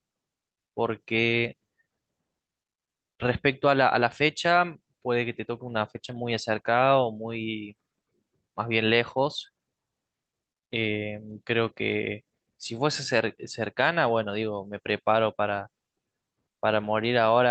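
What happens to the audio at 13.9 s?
Nothing goes wrong at 13.9 s: the speech carries on intact through the call path, with only the ordinary coding character and the top end limited to about 8 kHz, which fits Opus at a moderate bitrate of around 32 kbps.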